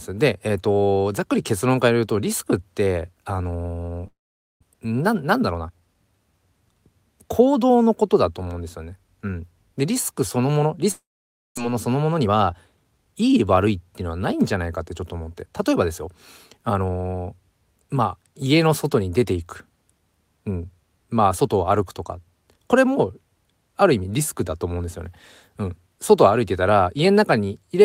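Speech, with two long network dropouts. At 4.07 s and again at 10.91 s the sound smears into a fading buzz, then goes silent until 4.65 s and 11.59 s. About 400 ms of speech is skipped each time, likely from packets that never arrived. After each gap comes a jitter buffer speed-up. From 4.74 to 5.95 s the speech runs about 10% fast, and from 11.67 to 13.45 s about 13% fast. The pitch stays the same, but it sounds hurried. Tiny pitch-period slices are being cut to shed the backlog of roughly 150 and 200 ms.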